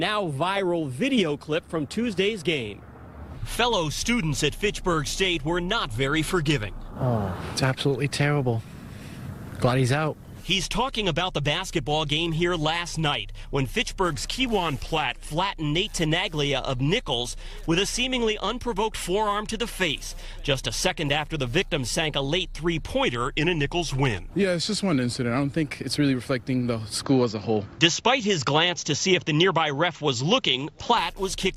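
From 14.46 to 15.30 s the audio sags flat and slows, about 111 cents down (just over a semitone) and about 6% slower, then snaps back to true pitch. The same detuning returns from 23.08 to 25.54 s, held longer this time. Both are likely a drift correction step: software reconciling two clocks changed the playback rate in one jump to rebalance its buffer, dragging speed and pitch down together until it stepped back.

From 27.04 to 30.98 s the sound turns duller and boxier with no gap at the change. Nothing above 7.6 kHz survives, a level jump of about 5 dB comes in, and a new noise floor sits roughly 40 dB below the signal. The likely cause is the input switched to a poorer device, a narrower-band microphone with its own tone and noise, taking over mid-recording.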